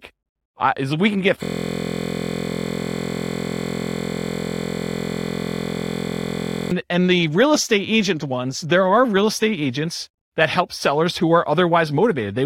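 At 1.43 s a system hang loop begins: the computer or driver stalled while the hardware kept replaying one 23.22 ms block, which fits a 1024-sample buffer. Until 6.71 s that fragment repeats over two hundred times, heard as a steady 43.1 Hz buzz.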